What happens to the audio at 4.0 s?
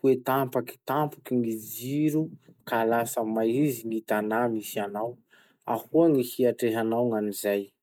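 Nothing goes wrong at 4.0 s; the speech there plays through intact, with no dropout, click, distortion or other fault.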